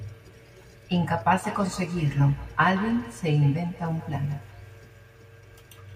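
From 1.33 s to the end of the speech clip there is feedback echo between two devices. A second device in the same room is replaying this microphone's signal, and the microphone picks that playback up again. Its own echo canceller cannot remove sound from another device's loudspeaker, so the loop stays closed. The result is a trailing copy of the speech arriving roughly every 150 ms, peaking at about 17 dB below the direct speech.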